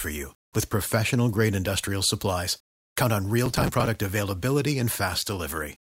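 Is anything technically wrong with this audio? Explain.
Yes. From 3.46 to 3.87 s the speech is hit by processor overload crackle. The processor fell behind on its small audio buffers, each only a few milliseconds long, and missed dozens of deadlines over a short stretch. Each missed buffer was skipped outright, so the sound jumps forward with a hard edge. Packed together, these tiny gaps form a gritty, tearing crackle over the speech for about 0.4 s. It stops when the load eases.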